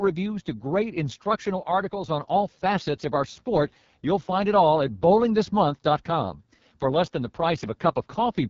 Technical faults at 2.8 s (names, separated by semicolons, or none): AMR wideband (HD Voice) codec